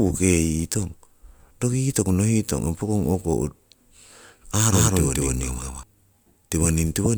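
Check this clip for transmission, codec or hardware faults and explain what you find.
There's one fault: a doubled audio track from 4.65 to 5.83 s. For that stretch the speech is joined by a second full-band copy trailing about 200 ms behind and roughly as loud as the original, so everything sounds stuttered and smeared. The copy has no decay or room colour, and it cuts in and out abruptly at both ends. The likely cause is the same signal being captured again through a slower path and mixed back in.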